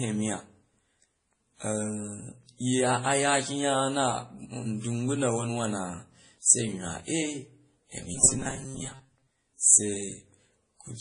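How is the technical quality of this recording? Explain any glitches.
The technical quality is compromised throughout by stacked codec damage, with one glitch near the end.

Transcoding between lossy codecs runs throughout. The speech was likely encoded twice at low bitrate, pointing to WMA then MP3 around 32 kbit/s, with nothing above 10.1 kHz and layered swirly artefacts.

Robotic sound from repeated short buffers occurs from 8.15 to 9.41 s. Short chunks likely replayed in place of most new audio, forcing a metallic 133 Hz buzz, consistent with roughly 7.5 ms buffers.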